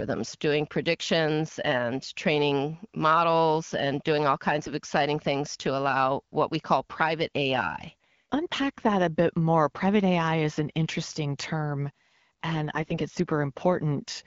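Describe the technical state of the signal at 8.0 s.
From 8.04 to 8.07 s, just before "unpack that a bit", AMR bit errors make the sound briefly hoarse and gargly. Flipped low-priority bits misplace excitation pulses and skew fine gain and spectral values. Pitch and level hold, with no gap or muting as packet loss would cause.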